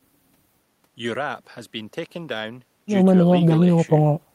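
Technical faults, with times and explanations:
No technical faults are audible in this speech recording.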